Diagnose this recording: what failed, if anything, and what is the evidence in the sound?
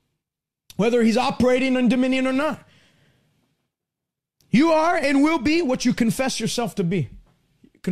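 Network: AAC frame loss with concealment. At 1.41 s, before "in dominion or", sound briefly smears. One 10 ms frame was rebuilt from earlier spectrum.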